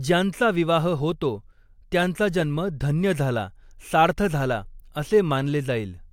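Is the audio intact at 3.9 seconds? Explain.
Yes, at 3.9 seconds the speech plays through intact, with no dropout, click, distortion or other fault audible at that moment.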